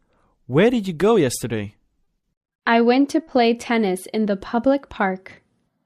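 Short concealed packet loss at 2.03, 2.19 and 3.23 s: 40 ms gaps were filled by extending the preceding sound, giving brief smears rather than the silent dropouts of unconcealed loss.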